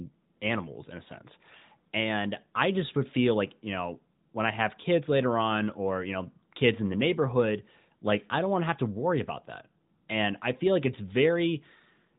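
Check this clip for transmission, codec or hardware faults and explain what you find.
No transmission, codec or hardware faults found; the speech carries the band limit of an AMR narrowband mobile codec path, with nothing audible above 4 kHz and only the light coding texture of a high-rate mode, around 12.2 kbps.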